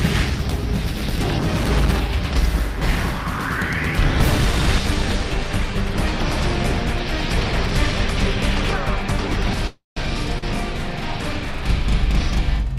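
The audio has three faults in its last few seconds, all starting after about 9.5 s. From 9.53 s to the end there is channel delay (doubling). One channel runs 40 ms behind the other, and the two are summed to mono, so every attack is heard twice at equal level, as a tight slap or a thickened double. On a waveform each transient appears as a pair of peaks 40 ms apart. On a spectrogram, steady tones show fine comb-filter striping with notches every 25 Hz. Inside that stretch, from 9.67 s to 9.99 s, comes a call audio freeze. The last sound is carried on as a fading buzz for about 290 ms, of which roughly 160 ms decays into silence. Then the audio resumes exactly where it stopped, with nothing skipped, so the rest of the clip runs later by that amount. The likely cause is packets held up in transit until the jitter buffer ran dry. On a spectrogram this shows as a smeared, horizontally streaked band fading to a blank gap, and on a waveform as a flattening envelope that drops to a flat line. 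At 10.38 to 10.46 s there is a short stall from a late packet. One sound is held about 41 ms too long, with a slight buzzy dip, because the next packet had not arrived on time and playback stretched what it had. On a spectrogram it appears as a brief frozen, horizontally smeared slice, and on a waveform as a short repetitive patch with a small dip in level.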